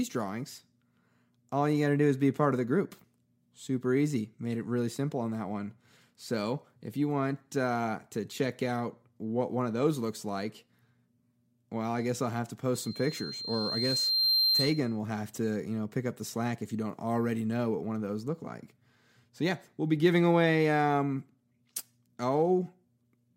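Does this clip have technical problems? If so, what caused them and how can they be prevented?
Yes. From 12.74 to 14.99 s a piercing tone near 4.2 kHz swells over roughly a second and a half until it rides about 5 dB above the speech, a classic loudspeaker feedback squeal. The microphone was picking up the loudspeaker it was feeding, and at 4.2 kHz the loop's gain passed one, so that frequency kept reinforcing itself. Keeping microphones behind or away from loudspeakers, lowering gain, and notching around 4.2 kHz would prevent it.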